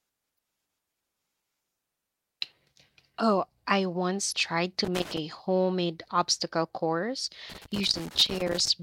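Damaged data in the compressed stream throws the decoder off sync at 0.35 to 0.37 s and again at 4.29 to 4.33 s, leaving short blips. A loose connector crackle follows, as a worn contact makes and breaks, chopping the signal into irregular scratchy bursts from 4.85 to 5.18 s, just before "homemade obstacle course", and from 7.50 to 8.68 s, after "homemade obstacle course".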